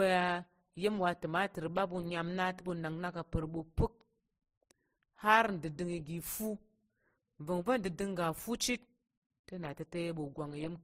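From start to finish the speech carries a layered coarseness: smeared, swirly consonants alongside a grainy, metallic edge, with nothing above 15.8 kHz. This points to transcoding between lossy codecs, likely an MP3 stage at a low rate followed by Opus at a similarly low rate. The second encoder wasted bits re-encoding the first one's artefacts while adding its own, and the lowest band limit in the chain carried through, so both kinds of damage sound together.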